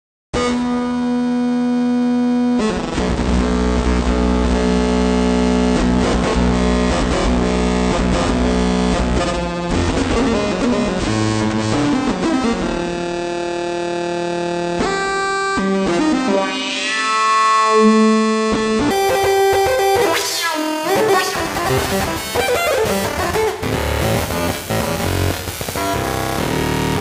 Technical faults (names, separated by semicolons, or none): section at the wrong speed